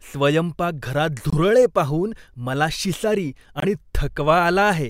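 At 1.30 s and again at 3.60 s, the speech drops to silence for about 36 ms. This is a Bluetooth dropout, likely from one lost packet of about 23 ms. Unlike a stall, the speech resumes further along, skipping the missing stretch.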